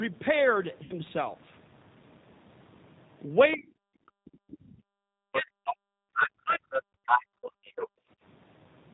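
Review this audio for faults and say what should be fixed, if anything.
The whole clip passes through the G.729 codec, which rebuilds speech from a vocal-tract filter, a pitch predictor and a few pulses per frame at a rate consistent with 8 kbit/s. The damage is plainly audible: the speech sounds rough and synthetic, with nothing above 4 kHz. Using a wideband codec such as Opus or G.722 would prevent this.

VoIP packet loss concealed by the speech codec occurs from 0.83 to 0.95 s. About 70 ms of audio never arrived, so the decoder extended its last pitch and filter with falling gain. The sound smears into a buzzy tone or coloured noise that fades, and the output stays weak as it recovers. A jitter buffer with forward error correction or redundancy would prevent this.

Other side's voice leaking through is heard from 3.51 to 3.57 s, 5.33 to 5.74 s and 6.14 to 7.89 s. The likely cause is an echo canceller that left part of the loudspeaker signal in the microphone. 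That second voice rises from well below the talker to roughly equal level by the last stretch. A better-converged echo canceller, or a headset, would prevent this.

Speech suppressed in double talk appears from 3.56 to 5.88 s, affecting about 1.5 s in total, and again from 6.42 to 7.12 s, affecting about 0.7 s. With both sides talking, the canceller likely could not separate the talker from the echo and turned everything down. The talker's speech dips by as much as roughly 40 dB. An echo canceller with proper double-talk detection would prevent this.

Background gated by the echo canceller occurs between 7.40 and 8.18 s. The canceller clamped the microphone while the loudspeaker played, so the room sound drops by up to about 36 dB for around 0.4 s in total before returning. Gentler suppression with comfort noise filling the gaps would prevent this.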